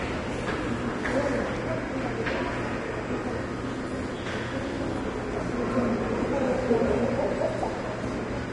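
Heavy low-bitrate encoding, likely Vorbis compression at a rate that fits roughly 31 kbps, runs through the whole recording. The encoder discards everything above 10.6 kHz and coarsely quantises the remaining treble, so the sound comes across dull yet hissy and grainy, with roughened tones and smeared attacks.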